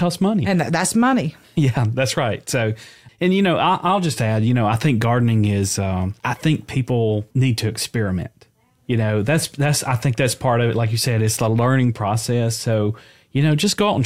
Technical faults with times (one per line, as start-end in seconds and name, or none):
none